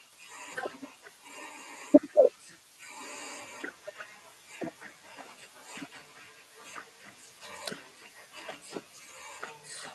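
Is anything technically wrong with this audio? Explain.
Yes, there's a brief echo leak from 2.67 to 2.78 s: a very faint copy of the speech about 263 ms late, likely a loudspeaker echo canceller letting some through. The Opus call path tops out around 12 kHz.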